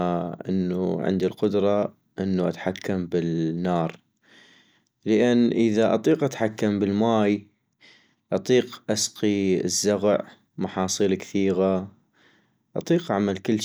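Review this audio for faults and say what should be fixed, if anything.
Nothing in this recording needs fixing.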